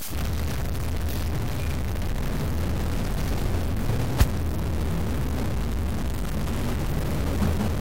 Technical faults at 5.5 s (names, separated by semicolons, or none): stuck bit